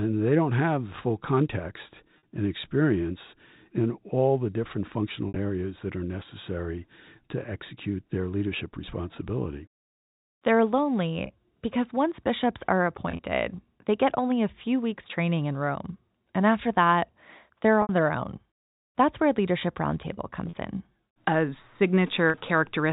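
Packet loss with pitch repetition occurs at 2.18, 5.28, 11.26, 13.09, 17.82, 20.47 and 22.3 s. Each 40 to 70 ms gap is bridged by a repeated pitch period, giving a brief buzzy hold, or for the longer ones a fade into silence before the speech returns with a short cross-fade.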